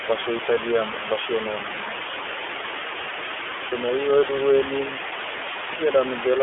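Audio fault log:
Throughout: low bit depth with dither. A constant, even hiss runs under the speech and stays at about the same level as the speech itself, yet the speech carries no grainy distortion. That pattern fits a signal rounded to about 4 bits with dither added first. The dither turns the coarse rounding error into steady white noise that does not follow the signal, so it is heard as a hiss bed rather than harshness on the speech.
Throughout: iLBC codec. The speech sounds boxed-in and telephone-like, slightly rough and synthetic, with the damage plainly audible. The band is confined to roughly 300 Hz to 3.4 kHz, and the artefacts fit iLBC's 30 ms frame mode at around 13.33 kbps. Each 30 ms frame's excitation is coded independently of the previous frame, so fine detail comes through coarsened. The hiss is also poorly represented by a speech model, which adds to the rough texture.
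3.68 to 3.73 s: lost iLBC frames. For about 30 ms the speech is replaced by a brief held, slightly buzzy, breathy vowel-like sound, and then normal speech returns at once. This fits a single lost frame. The decoder repeated the last pitch cycle mixed with noise to fill the gap. Because each iLBC frame decodes on its own, the next frame arriving intact restores the speech without a drawn-out recovery.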